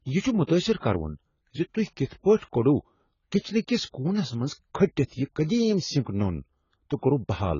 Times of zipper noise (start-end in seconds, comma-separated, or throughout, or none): none